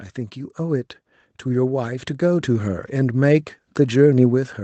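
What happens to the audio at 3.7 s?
Nothing goes wrong at 3.7 s: the speech runs on intact through the call path, with no dropout, glitch or distortion at that point.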